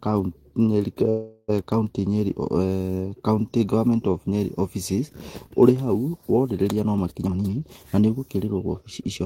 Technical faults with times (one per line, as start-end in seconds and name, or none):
1.09-1.50 call audio freeze
7.25-9.21 jitter buffer speed-up